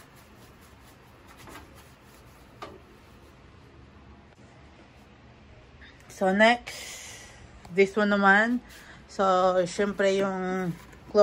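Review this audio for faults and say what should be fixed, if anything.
No faults; nothing needs fixing.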